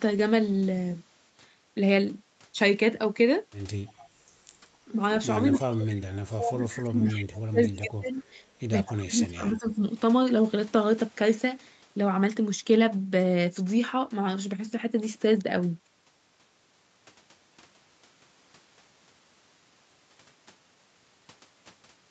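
Brief scraps of echo leak appear at 3.99 to 4.04 s, 5.54 to 5.60 s and 8.85 to 8.94 s. Each is a faint delayed copy of the far talker arriving 244 ms late, likely because a loudspeaker-side echo canceller let some of the returned signal through. They sit roughly 30, 25 and 20 dB below the speech. On a spectrogram they show as short, pale smears that repeat the harmonic pattern of sound heard a quarter second earlier. In the waveform they are small, ragged bursts.

From 5.7 to 8.24 s and again from 8.93 to 9.83 s the talker's speech is suppressed during double talk. While both sides speak, the canceller likely mistakes the local voice for echo and pulls it down in pieces, by up to about 30 dB. The pieces add up to roughly 2 s in the first stretch and 0.7 s in the second. The speech sounds dipped and gappy. The waveform envelope drops in notches, and the spectrogram shows faded or hollowed bands below the 8 kHz ceiling of the call audio.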